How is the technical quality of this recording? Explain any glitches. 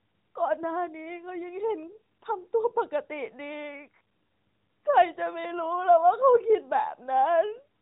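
No glitches can be heard anywhere in this recording.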